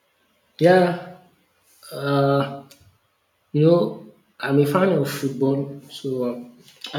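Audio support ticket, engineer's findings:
No audible faults found in this speech recording.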